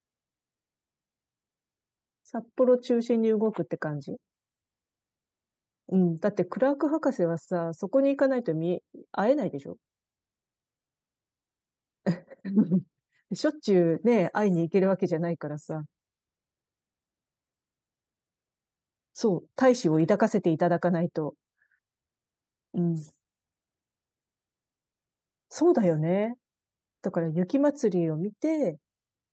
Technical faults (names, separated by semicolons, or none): short stall from a late packet